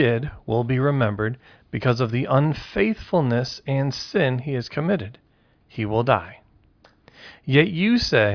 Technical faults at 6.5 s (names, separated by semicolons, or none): none